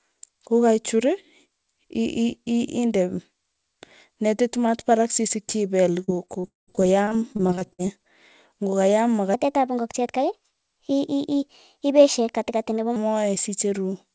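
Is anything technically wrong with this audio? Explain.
Yes, there are two problems in this speech clip. From 6.04 to 7.80 s there's repeated packet loss with a robotic sound: more than a dozen dropouts, the longest about 199 ms. Each one gets patched by stretching the last bit of sound, so roughly 29% of that stretch is filler and the speech turns choppy and robotic. Then from 9.34 to 12.96 s there's a section at the wrong speed. It runs about 1.23 times too fast, which lifts the pitch by about four semitones, so the voice sounds hurried and squeaky. The likely cause is that this part was played against the wrong clock. Throughout, nothing comes through above 8 kHz, which fits a G.722 call path.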